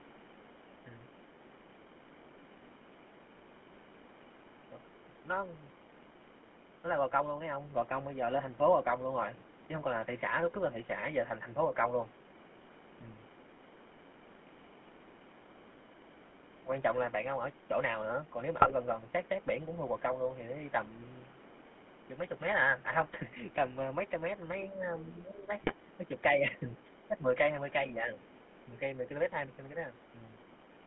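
The whole clip carries the sound of the GSM full-rate codec. The speech is buzzy and gravelly. That roughness comes from a coder that models the vocal tract and rebuilds the excitation from sparse, regular pulses. The damage is plainly audible. The line is band-limited to roughly 200 Hz to 3.4 kHz, so the top is dull and thin. The texture fits an old 13 kbps GSM channel.

GSM bit errors strike four times: 8.89 to 8.93 s, 18.6 to 18.74 s, 23.06 to 23.15 s, and 25.58 to 25.74 s. Corrupted bits reached the decoder. Bad filter, pitch or gain values then distorted the spectrum or level for a few frames. Each burst sounds like a brief squawk, pop or gargle.

At 24.67 to 24.84 s the speech dips by a few decibels for about 150 ms. It happens again at 27.91 to 28.17 s. This is speech suppressed in double talk, likely caused by both sides talking at once. The echo canceller could not tell the talker from the loudspeaker echo, so it pulled the level down. 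Each dip is short and shallow. It is heard as a momentary sag in loudness.

At 26.74 to 26.94 s, a second voice leaks through faintly. It returns at 28.35 to 28.65 s. This is the other side's voice leaking through, likely because the echo canceller left some loudspeaker sound in the microphone signal. The leakage sits very low, around 30 dB under the main speech in the first case. It is lower still in the second. Each appears as a brief scrap behind the talker.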